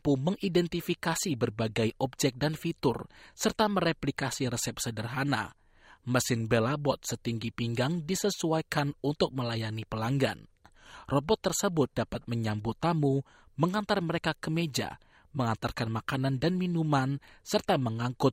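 Speech recording with no technical faults to report.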